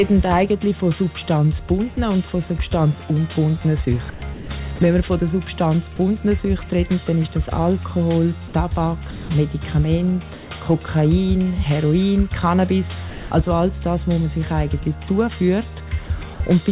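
From 4.1 to 4.49 s the sound is chopped by the voice detector, most likely because the detector toggled transmission on and off several times. About 270 ms of quiet sound edges became comfort noise. On a spectrogram, detailed sound alternates with flat, even hiss, and the waveform shows ragged gaps.

Sound dropped by the voice detector occurs at 4.76–4.79, 8.48–8.54, 9.11–9.29 and 13.1–13.31 s. Each time the detector likely judged faint sound to be background and stopped sending, so steady noise plays until it retriggers. The longest loss is 210 ms. In the waveform these appear as sudden low, uniform stretches, and on the spectrogram as smooth bands without structure.

From 10.34 to 10.49 s, comfort noise replaces the background, likely because transmission paused. The real background, about 19 dB below the loud parts, becomes featureless synthetic noise about 2 dB quieter. This shows as a slight level dip and a smeared, textureless patch.

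From 16.07 to 16.4 s the sound is chopped again, with about 90 ms lost to comfort noise in short bites.

Throughout the clip, nothing appears above 4 kHz, which fits a narrowband G.711 A-law call path.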